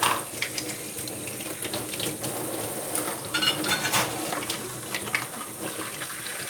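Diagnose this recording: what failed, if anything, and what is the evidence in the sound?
Nothing failed here: the sounds come across steady and intact, with nothing in the audio pointing to trouble anywhere along the chain.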